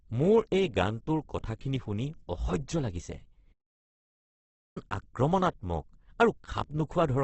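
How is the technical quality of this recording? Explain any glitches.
The recording has heavy codec damage throughout and one dropout in the middle.

From start to end, the speech sounds rough and grainy with nothing above 8.2 kHz, likely from Opus compression at a low rate around 12 kbps in its CELT mode. The encoder fills starved bands with folded or noise content instead of leaving holes.

From 3.52 to 4.78 s, just after "কথাখিনি শুনি অসহ্য লাগিছে", the sound stops for about 1.24 s. This is likely a playback stall, where the player ran out of data or its thread was blocked, and output stayed silent until it recovered.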